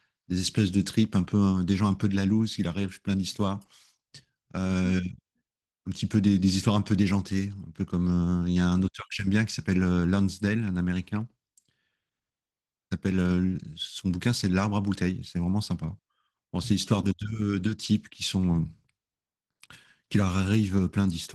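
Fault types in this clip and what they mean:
Opus voice compression: the encoder starved the speech of bits, coding its excitation coarsely, which fits about 16 kbps in hybrid mode, leaving the speech plainly hoarse and slightly robotic throughout.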